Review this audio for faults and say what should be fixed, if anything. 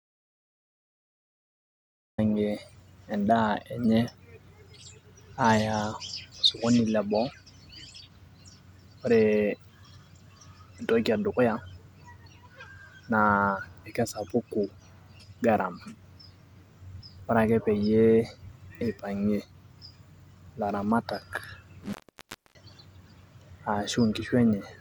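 The speech opens in an audio dropout to silence, already under way when the clip starts and lasting until 2.18 s. That stretch holds silence, with no room tone, so the waveform is a dead-flat line and the spectrogram is completely blank before the speech appears abruptly. The likely cause is an input that was disconnected or muted while recording continued. Anything spoken during those first 2.18 s is lost. To prevent it, confirm the input is live and showing level before recording starts.

At 21.84 s an intermittent contact breaks the signal until 22.63 s, with the line open for about 0.62 s. A loose cable or plug separated briefly, so the speech cuts out with crackle at both edges and faint hiss in between. On the waveform this looks like a near-flat gap bracketed by sharp spikes. The spectrogram shows vertical broadband streaks at each edge and a thin, low-level noise floor through the gap. 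To prevent it, reseat or replace the cable and connectors and secure them against movement.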